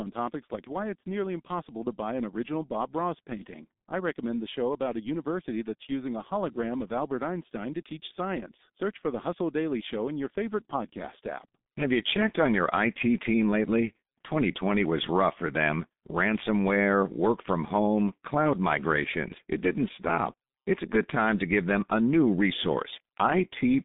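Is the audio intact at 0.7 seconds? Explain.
No. At 0.7 s, as throughout, G.723.1 codec damage applies: the low-rate frame coding leaves nothing above 3.7 kHz, so speech sounds muffled, hoarse and smeared.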